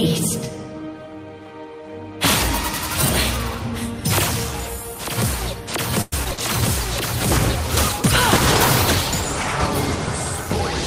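Audio from a call, with two problems close together. From 6.01 to 6.39 s there's a burst of repeated packet loss, the choppy, robotic kind. A handful of short holes land one after another, the longest about 109 ms, and each is papered over by stretching the last bit of sound. That concealment covers roughly a third of the stretch, so it comes out choppy with chunks missing. Then from 6.61 s to the end the quality sinks in a call bitrate drop. The network estimate clearly fell, and the sound goes coarse and watery with the top end dulled. That fits the encoder being squeezed from about 64 kbps down to 20 kbps, and it sits at the worst of that for around 2.6 s without recovering before the clip ends.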